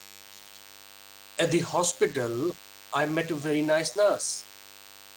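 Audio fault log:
throughout DECT cordless phone buzz: a thin, steady, harmonic-rich buzz sits roughly 25 dB under the speech for the whole clip. It is pitched at 100 Hz because a nearby DECT handset or base sends a radio burst every 10 ms, which the audio circuitry rectifies into sound.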